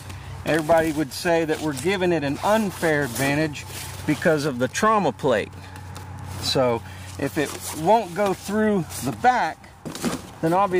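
Nothing in the audio stood out as a technical problem on listening.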